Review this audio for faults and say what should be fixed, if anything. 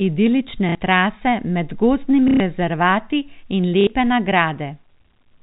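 Three short robotic stutters break up the speech at 0.69–0.75 s, 2.28–2.40 s and 3.81–3.87 s. This is packet loss with the last packet repeated: when packets went missing, the receiver replayed the previous packet until new audio arrived. The first and third gaps last 60 ms and the second 120 ms. The repeats also produce a buzz near 33 Hz, which fits 30 ms packets. The underlying G.711 A-law telephone coding limits the sound to below 4 kHz. To prevent this, the receiver should use a jitter buffer with proper packet loss concealment, which extrapolates pitch and fades out over longer gaps instead of repeating packets verbatim.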